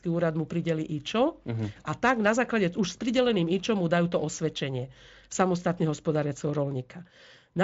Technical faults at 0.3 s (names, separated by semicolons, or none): none